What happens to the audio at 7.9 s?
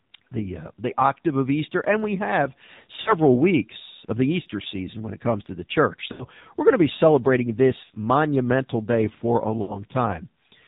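From 7.84 to 7.90 s, lost AMR speech frames: about 60 ms went missing, which fits three 20 ms frames. The decoder reused the last good pitch and vocal tract settings at falling gain. The sound briefly drags and fades instead of cutting to abrupt silence like a plain dropout. Underneath, the AMR narrowband mobile codec at 7.4 kbps keeps the whole clip band-limited to 4 kHz and audibly buzzy, a steady coloration rather than a momentary break.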